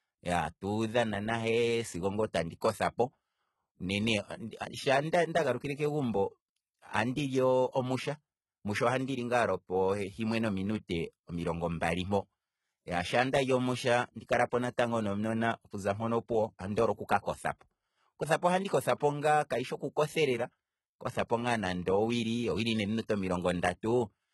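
From the start and through the whole recording, the treble has a synthetic, gritty edge and the audio stops dead at about 11.8 kHz. Sibilants come out lispy and metallic, as though the upper band were a shifted copy of the lower one. This points to HE-AAC compression, likely with spectral band replication rebuilding the highs from lower bands under a coarse envelope. The damage is heavy, which fits a bitrate around 16 kbps, so treble harmonics fail to line up with the fundamentals below the crossover.

At 10.88 s, just before "omilongo mbali", a brief pre-echo appears: a short hiss about 12 ms long runs ahead of the onset, and the attack itself sounds softened. The transient fell late in a transform block, and the quantisation noise the codec sized for that loud onset was spread across the whole block, including the quiet stretch before it.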